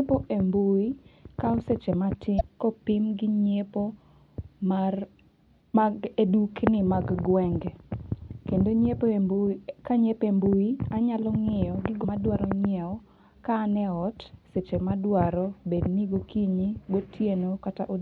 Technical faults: damaged data in a compressed stream

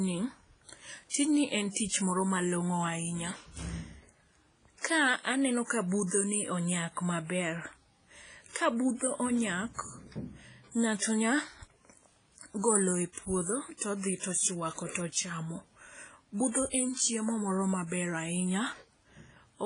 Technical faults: WMA compression; pre-echo

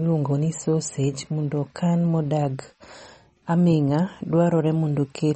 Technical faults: MP3 compression

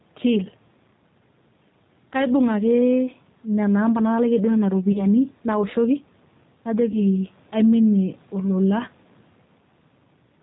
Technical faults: gain pumping; G.729 codec; VoIP packet loss concealed by the speech codec

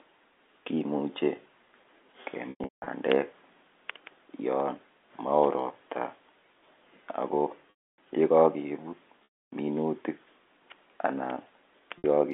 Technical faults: packet loss with pitch repetition

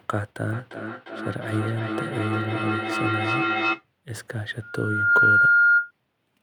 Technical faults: feedback echo between two devices; loudspeaker feedback squeal

